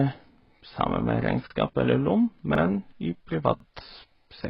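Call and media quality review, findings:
Transcoding between lossy codecs, likely AAC-LC then HE-AAC, both around 16 kbit/s. Throughout the speech. Second encoder re-spends bits on first-pass artefacts, stacking its own artefacts on top; nothing above 5.7 kHz survives, so sibilants sound dull and muffled.

Overlapping chunks at the chunk boundaries: 0.45, 1.50, 2.55, 3.60 s. Chunker starting each chunk before the previous ended, roughly 1 s cadence. Each join replays 50 ms of audio, heard as a brief stutter or click at regular intervals.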